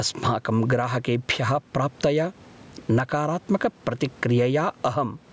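Throughout, the microphone gain is set far too high, likely with a fast limiter pulling it down on every loud sound, swinging by around 15 dB. This gain pumping brings loud and soft parts closer in level, squashing the dynamics.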